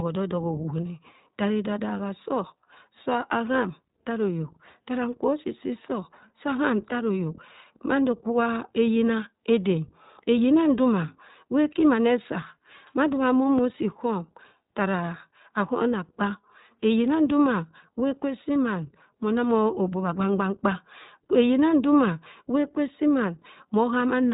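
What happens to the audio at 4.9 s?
At 4.9 s, as throughout, the iLBC codec codes each 20 ms frame independently, cutting everything above 3.8 kHz and leaving the speech plainly rough and synthetic.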